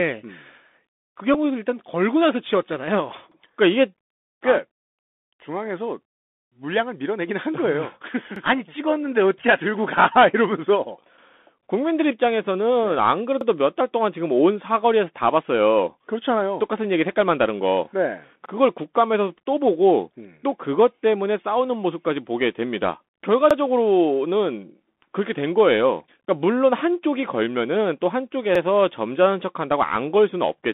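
Throughout the clip the speech carries the Bluetooth CVSD headset codec: a delta coder stepping up or down each sample, squeezed into a line band of roughly 200 Hz to 3.6 kHz. Sibilants turn scratchy, loud peaks smear, and a granular hiss sits underneath. A spectrogram shows a hard ceiling near 3.6 kHz with a grainy floor.

At 1.34 s a Bluetooth headset packet repeated: about 7.5 ms of signal, which fits two lost packets, was replaced by the previous packet's data decoded again. It is a tiny tick, and the waveform shows a brief repeated snippet.

Overlapping chunks occur at 3.32, 8.36, 13.41, 18.46, 23.51 and 28.55 s, every 5 s. Each new chunk starts about 48 ms before the previous one ended, so that slice plays twice and causes a stutter. The waveform and spectrogram show a duplicated segment at each join.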